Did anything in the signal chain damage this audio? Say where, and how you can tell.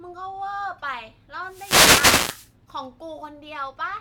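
Yes. A wireless microphone noise hit occurs from 1.44 to 2.54 s, at the radio link ahead of the converter. The analogue FM signal faded as reflections cancelled, so receiver noise swelled into a swish of static over the speech. A spectrogram shows broadband hiss filling that span. The waveform's noise floor rises.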